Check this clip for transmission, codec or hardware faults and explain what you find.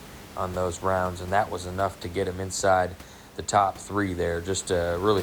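No transmission, codec or hardware faults turn up here, just some ordinary room noise sitting about 19 dB under the speech, which belongs to the recording itself.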